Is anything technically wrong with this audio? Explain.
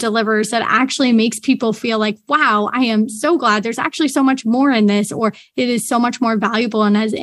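No, nothing technically wrong can be heard in this speech recording. There is no technical fault anywhere in it.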